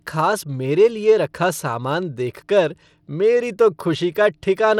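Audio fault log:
Throughout: Bluetooth SBC compression. The sound points to a link that was likely running SBC at a low bitrate, around 96 kbps. Too few bits are spread across its broad sub-bands, so the top bands are starved and the remaining ones are coarsely quantised. As a result, the speech has nothing above 17.3 kHz, the upper treble thins and flickers, and a plainly audible gritty, aliased grain sits over the whole clip.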